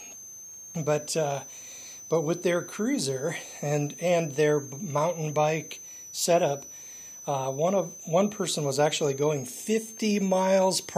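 A switching power supply is running in an audible burst mode or beating against another supply, throughout the clip. The result is a thin high whistle, drifting between about 5.9 and 6.5 kHz, sitting roughly 20 dB below the sound.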